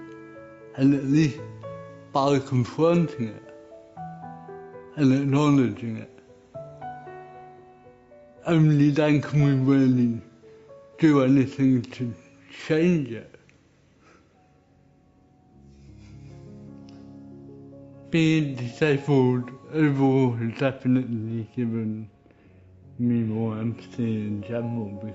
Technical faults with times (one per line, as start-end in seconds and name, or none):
none